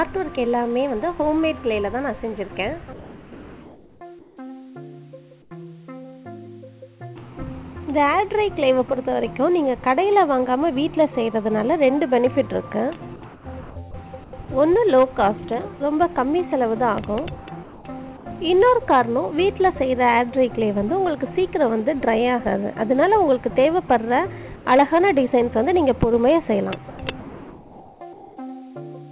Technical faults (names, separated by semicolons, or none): comfort noise in place of the background; sound dropped by the voice detector